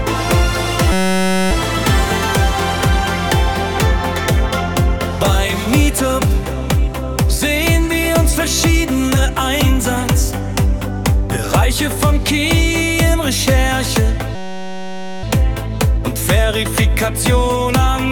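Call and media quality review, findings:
System hang loop, 0.92–1.51 s: host or driver stalled while the audio device kept replaying one 5.33 ms slice of its ring buffer, which fits a 256-sample buffer. The exact repeats fuse into a steady 188 Hz buzz replacing the sound.

System hang loop, 14.35–15.23 s: same stall, same 5.33 ms loop, same 188 Hz buzz, lasting longer. Playback resumes afterwards with no noticeable gap.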